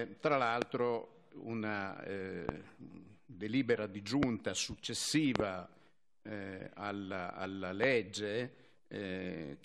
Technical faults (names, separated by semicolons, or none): loud pop